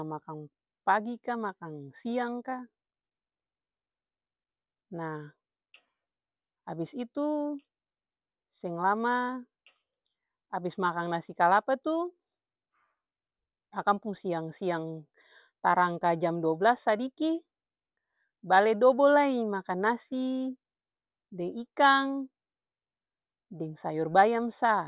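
Nothing stood out on listening to this speech recording.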